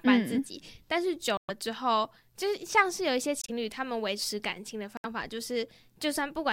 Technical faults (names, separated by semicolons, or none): corrupt frame muted